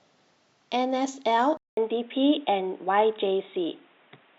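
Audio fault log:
1.57 to 4.39 s, input switched to a poorer device: recording likely moved to a lower-grade microphone or headset link that passes nothing above 3.8 kHz. After a 0.2 s gap, the speech turns dull and boxy at much the same loudness, with a faint new background noise underneath.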